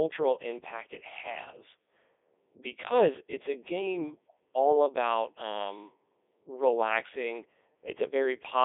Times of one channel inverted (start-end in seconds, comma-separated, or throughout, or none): none